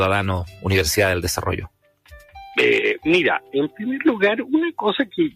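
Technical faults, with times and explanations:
Throughout, noise suppressor applied to music or sounds: the level breathes and flutters. Held parts sag and lift again by a few decibels, around 5 dB at most, while sharp onsets stay intact. A suppressor tuned for speech is treating the steady, sustained and reverberant parts of this audio as background noise and pulling them down. Its gain chases those parts moment to moment, so sustains pump and tails thin out.
0.46 to 0.64 s and 1.64 to 2.36 s, sound cut by the noise suppressor: the sound dips noticeably. At 0.46 to 0.64 s it drops by about 9 dB, affecting roughly a fifth of a second. At 1.64 to 2.36 s it drops by about 18 dB, affecting roughly half a second. The suppressor judged these stretches to be noise and cut them harder than the surrounding audio, so their body and decay sink away rather than sounding through.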